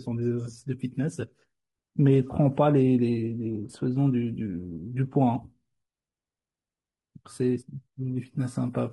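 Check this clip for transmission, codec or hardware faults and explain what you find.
One codec fault runs through the whole clip. Low-delay AAC compression is present from start to finish and is likely AAC-ELD, at a rate that points to about 32 kbps. This codec trades frequency resolution for speed by coding very short frames, so the pitch harmonics of the speech are poorly separated and starved of bits. The damage is plainly audible: the voice sounds rough and grainy, with noise filling the gaps between harmonics.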